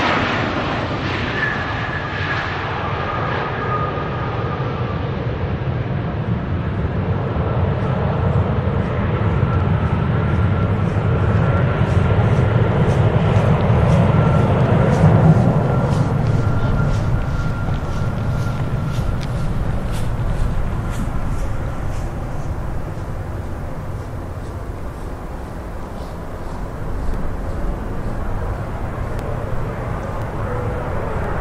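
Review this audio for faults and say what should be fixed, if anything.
Periodic USB or driver dropouts show up near the end: from 26.11 s to 31.24 s there's a tiny tick roughly every 1.02 s, half a dozen or so in all. Each one is a gap of about a millisecond where the audio simply drops to silence, which is what you get when some background task on a fixed timer stalls the USB bus or audio driver. Worth fixing: track down and disable that periodic task, or raise the driver's buffer size so it rides through the stalls.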